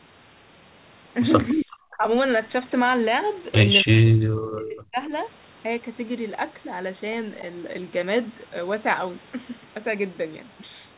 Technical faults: speech suppressed in double talk; echo leak

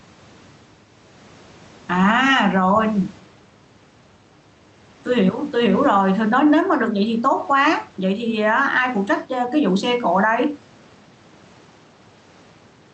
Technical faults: gain pumping

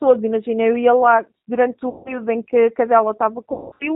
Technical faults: G.729 codec; VoIP packet loss concealed by the speech codec

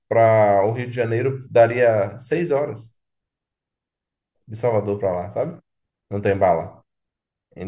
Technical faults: none

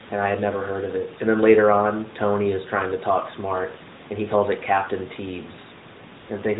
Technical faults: AMR comfort noise

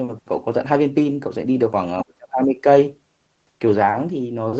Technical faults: speech suppressed in double talk

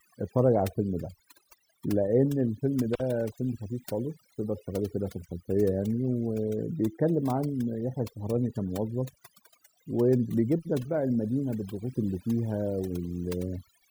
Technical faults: overdone noise removal; intermittent contact

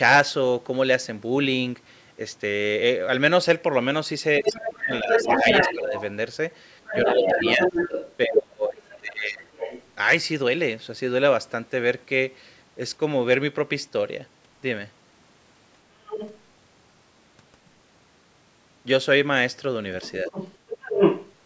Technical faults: speech suppressed in double talk; other side's voice leaking through

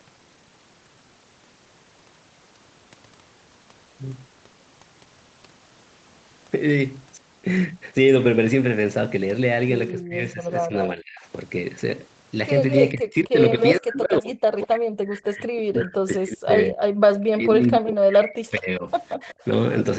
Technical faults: skip ahead; jitter buffer speed-up; speech suppressed in double talk; echo leak

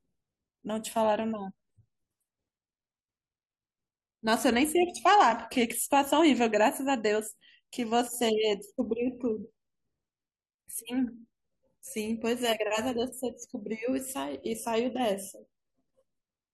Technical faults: compressed frames skipped

